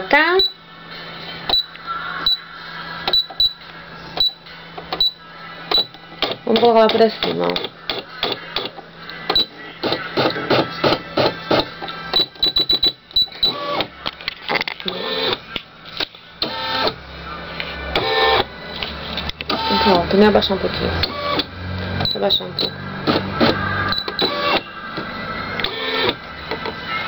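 Throughout the clip, the sound was resampled upward by joining samples with straight lines. This is a weak filter, and the spectrum points to a conversion from 24 kHz to 44.1 kHz. The result is imaging from linear upsampling. The top of the original band is dulled, and a mirrored copy of the spectrum sits between 12 kHz and 24 kHz, roughly 30 dB below the signal. It adds a faint metallic shimmer to the brightest, highest-pitched moments.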